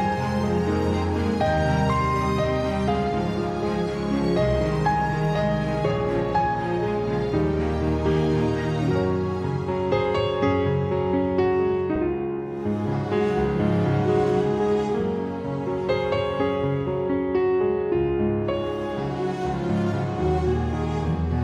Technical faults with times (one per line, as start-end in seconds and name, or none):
11.96 underrun with held sample